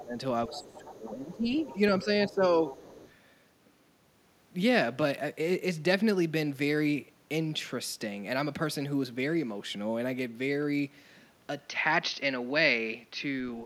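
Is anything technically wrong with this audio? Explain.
Yes, there are three problems.

Speech suppressed in double talk, 0.00 to 2.66 s: both ends were talking at once, and the echo canceller most likely could not separate this talker from the loudspeaker echo, so it turned both down. For about one and a half seconds in total the speech dips, by around 15 dB at the deepest.

The other side's voice leaks through from 0.52 to 2.32 s and again from 2.67 to 3.11 s. A second voice, around 20 dB below the main speech, comes through faintly. It is likely loudspeaker playback that the echo canceller did not fully remove from the microphone signal.

Input switched to a poorer device at 11.61 s, lasting to the end: the input most likely changed to a narrower-band microphone or headset call profile. The band narrows, so the sound turns duller, with no gap and no level jump at the switch. A faint new noise floor sits roughly 50 dB down.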